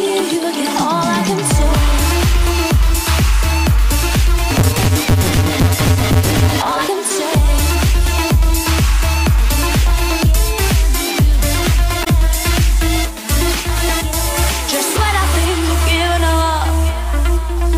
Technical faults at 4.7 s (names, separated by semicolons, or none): block size mismatch (truncated)